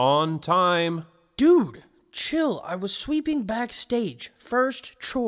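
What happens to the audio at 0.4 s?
Nothing goes wrong at 0.4 s; the audio plays through that moment intact, with no dropout, click or other fault to be heard.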